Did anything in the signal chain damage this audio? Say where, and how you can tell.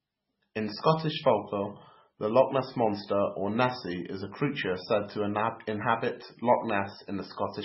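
Yes. Throughout the speech the sound is watery and swirly, with a dull top end where nothing survives above about 5.6 kHz, and s sounds break into metallic chirps while consonant attacks smear. That points to the codec stage, most likely heavy MP3 compression at a very low bitrate, around 16 kbps. Starved of bits, the encoder cuts the treble at a fixed point and zeroes quieter frequency lines, which flicker on and off between frames.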